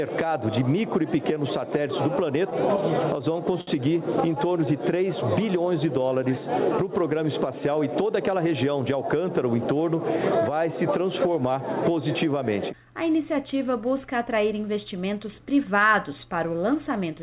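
At 3.61 s a short stall from a late packet stretches the sound for about 62 ms, holding it slightly too long with a slight buzz or dip before playback resumes, nothing lost.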